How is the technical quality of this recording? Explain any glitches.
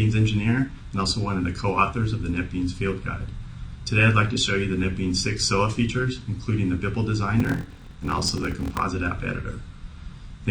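The recording has one glitch, a block size mismatch (padded), from 7.38 to 8.86 s. One stage hands over shorter blocks than the next stage reads. The missing part of each block is filled with silence. That leaves a tiny gap in every block, heard as a 43.1 Hz buzz, which fits 1024-sample blocks at 44.1 kHz. The sound also drags, running at 0.861 times normal speed, with its timbre kept.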